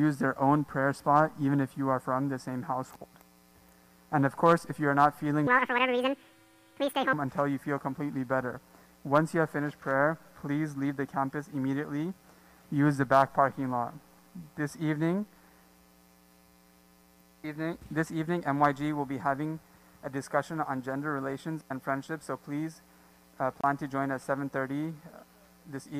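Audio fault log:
5.47–7.13 s, section at the wrong speed: the sound jumps up by nearly an octave and rushes along, then drops back to normal. It is playing about 1.81 times too fast, which raises pitch by roughly ten semitones. The likely cause is the section being run against the wrong clock.
23.61–23.64 s, Bluetooth dropout: a sudden silent hole of 29 ms, after which the sound picks up further along, as if it had kept playing. The likely cause is a couple of wireless packets arriving too late and being discarded.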